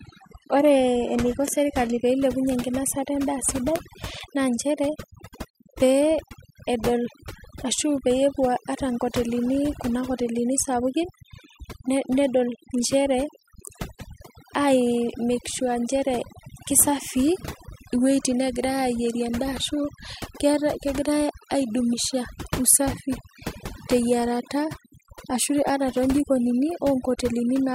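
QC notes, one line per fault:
throughout, overdone noise removal: The background sits at near silence and is dotted with twinkling specks. A noise reduction stage was set too strongly. It pushes individual frequency bands far down or shuts them off whenever they come close to its noise estimate. Isolated bands that pop back up become the specks, and the quieter parts of the speech are removed along with the noise.
0.0 to 2.0 s, adaptive stream starting at a low bitrate: The opening two seconds sound dull and smeared, with nothing above 12.3 kHz, a synthetic-sounding top end and heavier codec artefacts. At 2.0 s the sound improves suddenly, with no gap, just before "pee ilepunye enkinosata endaa". The player began on a low-quality rendition so playback could start quickly. The sound points to about 16 kbit/s HE-AAC. Once it had measured the connection, it switched to a richer version, which fits roughly 96 kbit/s AAC-LC.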